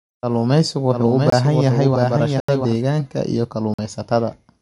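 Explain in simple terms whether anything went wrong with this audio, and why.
MP3 compression runs through the whole speech recording, likely from saving it as a heavily squeezed MP3. To save space, the encoder discards everything above about 11.3 kHz and drops faint detail, so the voice sounds dull, watery and swirly, with hissy sounds turning metallic.

A doubled audio track is audible from 0.91 s to 2.75 s. A second, somewhat quieter copy of the speech plays about seven tenths of a second behind the original. It starts and stops abruptly with no room echo, which likely means the same recording was mixed in twice.

A block of digital silence occurs three times. There is a 23 ms gap at 1.30 s, an 84 ms hole from 2.40 s to 2.49 s, and a 46 ms hole from 3.74 s to 3.79 s. In each, the playback software likely missed its deadline, so the sound cuts to pure nothing and back.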